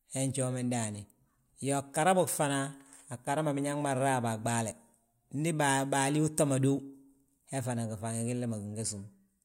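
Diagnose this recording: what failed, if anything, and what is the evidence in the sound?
Nothing failed: the sound gives no evidence of a fault at any stage of this recording.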